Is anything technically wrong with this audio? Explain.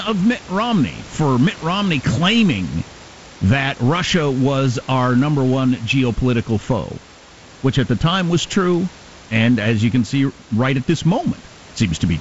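No, nothing is technically wrong with this speech. The room's background noise sits about 22 dB below the voice, and the G.722 wideband telephone coding at 48 kbit/s leaves nothing above 7.7 kHz, with a faint hiss in the top band.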